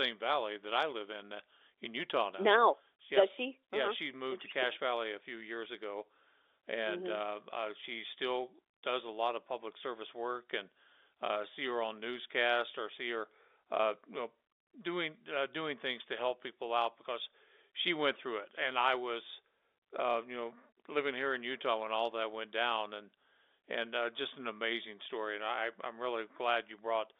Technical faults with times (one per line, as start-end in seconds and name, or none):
none